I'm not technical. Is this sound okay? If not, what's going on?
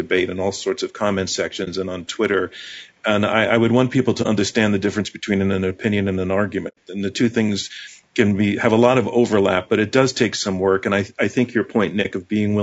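No, not quite. The whole recording has a rough, grainy edge to the speech, with a fuzzy, artificial sheen on top. That's most likely low-delay AAC compression, the kind used for video calls. It squeezes the sound into very short chunks so there's little lag, and squeezing it that hard smears the natural ring of a voice and lets a hiss creep into it.

On top of that, there are four brief dropouts from AAC frame loss with muting. Small pieces of the stream never arrived, so the player filled those gaps with silence, fading out and back in. You'll hear short soft holes at 1.64, 4.22 and 12.02 seconds, each about 30 ms. A longer one at 6.68 seconds lasts about 90 ms, which fits several missing pieces in a row.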